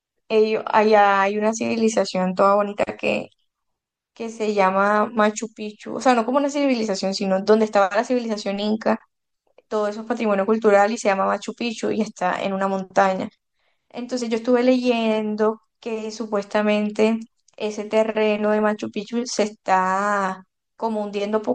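Speech, and the whole thing has that watery, swirly texture, so it's most likely MP3 compression, and fairly heavy at that. The damage is plainly audible from start to finish, which fits a low bitrate of around 64 kbps. At that rate the encoder drops quieter frequency detail that flickers in and out frame to frame, so s sounds get chirpy and consonant attacks go soft and smeared.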